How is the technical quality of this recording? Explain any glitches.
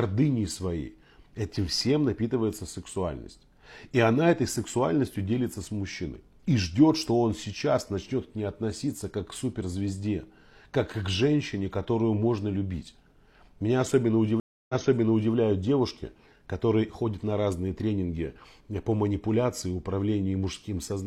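One glitch stands out, a stream reconnect between 14.4 and 15.34 s. The connection dropped and the player restarted decoding mid-stream after about 0.29 s of silence. The server resent buffered audio, so the sound resumes roughly 0.65 s earlier, repeating material before "девушки которые ходят на".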